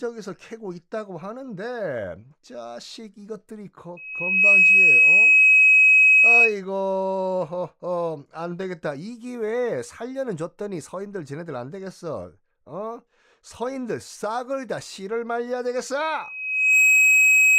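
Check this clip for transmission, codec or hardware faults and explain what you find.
The clip has one hardware fault, occurring twice in this speech recording.

Loudspeaker feedback squeal appears from 3.97 to 6.55 s and again from 16.20 s to the end of the clip. A microphone is picking up the loudspeaker it drives, and at 2.6 kHz the loop gain rises above one, so that frequency feeds on itself. Each time, a single piercing tone swells over roughly half a second until it stands about 15 dB above the speech, then holds as a steady squeal.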